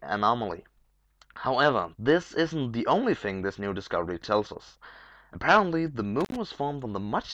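An intermittent contact fault hits at 6.21–6.36 s. A loose connection opens for about 75 ms, so the audio drops out with crackle at the edges. The waveform collapses to a flat, near-silent gap, and the spectrogram shows broadband clicks bracketing it.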